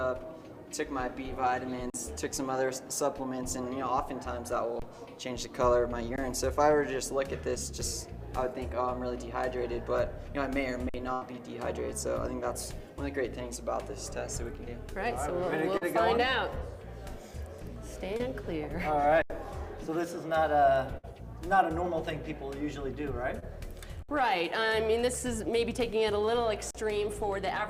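The audio has three kinds of dropout. Seven underruns with held sample, at 1.90, 4.80, 6.16, 10.89, 19.22, 24.03 and 26.71 s, each 20 to 80 ms long, show as flat, held-level stretches in the waveform and blank vertical gaps on a spectrogram. Playback stalled, then resumed with roughly matching audio lost. Two bursts of packet loss, at 11.13 s (about 80 ms) and 20.97 s (about 60 ms), appear as a smeared, decaying continuation of the preceding spectrum before the audio jumps ahead past the missing part. Short concealed packet losses at 15.77, 18.17 and 23.39 s, each a few hundredths of a second, leave brief blurred patches where the receiver extrapolated the last sound and blended back.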